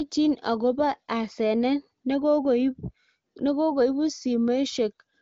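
No technical faults can be heard in this speech clip. It has the character of AMR wideband (HD Voice) coding, with content stopping at about 7.6 kHz and no more than faint coding damage, which fits a higher bitrate of around 18.25 kbit/s.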